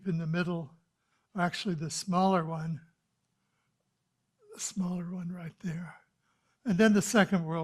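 Nothing stood out as a technical fault on listening to this audio.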